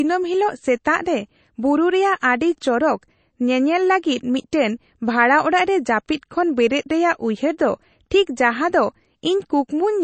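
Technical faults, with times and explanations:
Throughout, MP3 compression. The speech sounds watery and swirly, and nothing is heard above 8.3 kHz. This plainly audible damage is likely from MP3 encoding, and the cut-off fits a bitrate near 32 kbps. The encoder cuts the whole top band at a fixed frequency. It also zeroes weaker frequency lines. Those lines switch on and off from frame to frame, which causes the swirl. S sounds lose their crisp top.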